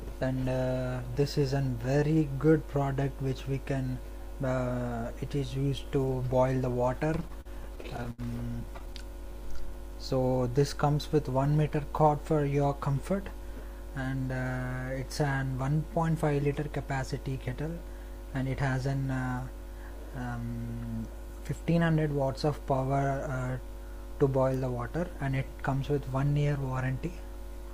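Between 7.21 and 8.21 s there are repeated stalls, a stutter: ten small gaps where packets showed up late and the jitter buffer ran dry. The receiver stretched the last sound over them, about 191 ms in all, with the longest hold at 77 ms. It drags and hiccups. A lighter burst follows from 8.66 to 8.97 s, with four gaps totalling 35 ms, none longer than 10 ms.

Right after that, from 9.13 to 9.92 s, there's a jitter buffer slow-down. The buffer was low or had just raised its target delay, so the receiver repeated single pitch periods to rebuild its reserve. That added 37 ms and dropped playback to 96% speed, so the sound feels a bit drawn out while the pitch stays put.

Later, from 21.07 to 21.93 s, a jitter buffer speed-up does the opposite. Too much audio had piled up in the buffer, so the receiver trimmed short pitch-period chunks, roughly 50 ms altogether. The sound runs at 106% speed with the same pitch, and it comes across as slightly hurried.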